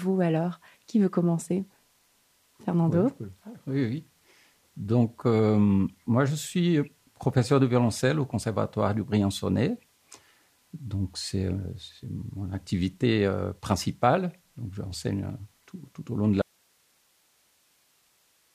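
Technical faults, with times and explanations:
16.42 s to the end, audio dropout to a faint residue: the wanted signal was likely lost somewhere upstream while the path after the break stayed live and kept passing whatever reached it. The sound cuts off abruptly, not as a pause or fade, and the rest of the clip holds only hiss roughly 40 dB below the earlier signal level. The sound does not come back before the clip ends.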